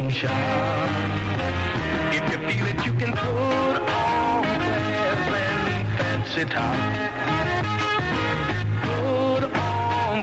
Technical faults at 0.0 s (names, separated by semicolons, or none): none